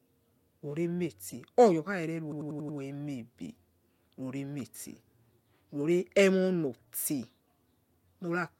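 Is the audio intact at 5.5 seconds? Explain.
Yes, the speech at 5.5 s plays through cleanly, with no dropout, click, distortion or other fault at that moment.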